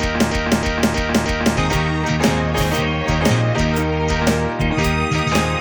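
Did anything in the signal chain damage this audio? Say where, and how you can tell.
Yes. From the start to 1.58 s, already under way when the clip begins, a 0.31 s fragment repeats exactly four times back to back: a broken-record loop. A stalled player, encoder or stream buffer likely kept resending its last held fragment, so the intended audio is lost.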